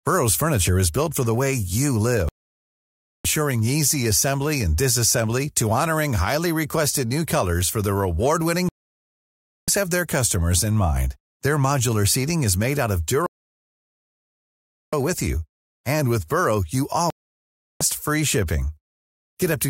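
Speech that drops to silence four times: 2.29–3.25 s after "for the way you", 8.69–9.68 s before "have their customers", 13.26–14.93 s, and 17.10–17.81 s before "free shipping". This is digital broadcast dropout: the receiver muted on lost or corrupted frames, and whatever was sent during each gap is gone.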